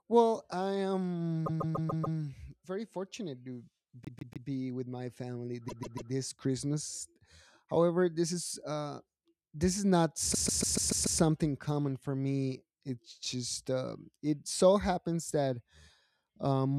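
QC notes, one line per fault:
1.45–2.17 s, repeated frames: a 144 ms block of compressed frames was sent again five extra times, so the speech stutters, adding 720 ms.
4.05–4.48 s, repeated frames: a 144 ms block replays three extra times, giving a short stutter and stretching the audio by 432 ms.
5.68–6.11 s, repeated frames: another 144 ms block plays three more times, heard as a stammering loop, adding 432 ms.
10.33–11.20 s, repeated frames: the longest run, a 144 ms block repeated six extra times, produces a sustained stutter and adds 864 ms to the speech.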